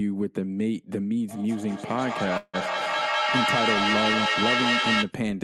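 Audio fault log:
1.28–5.16 s, feedback echo between two devices: the speech returns roughly every fifth of a second, each pass thinner and ringing, and the repeats build to about 2 dB above the speech instead of decaying. A second device in the room replays this call into the microphone, and neither echo canceller removes the other's playback.
2.37–2.55 s, call audio freeze: the sound stretches into a fading buzz or hiss that ends in about 30 ms of silence, 161 ms in all, and resumes exactly where it stopped, nothing lost but everything after it 161 ms later. Likely a late packet burst emptied the jitter buffer.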